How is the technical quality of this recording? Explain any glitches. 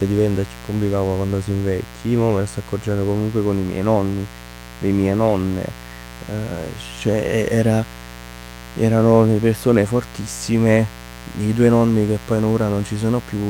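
The recording is marred by one fault that runs for its full length. Mains buzz, present throughout: sharp switching spikes from the 60 Hz supply, arriving twice per cycle, leak into the signal path and spread harmonics up into the kilohertz range, producing a steady, raspy buzz sitting roughly 20 dB beneath the speech.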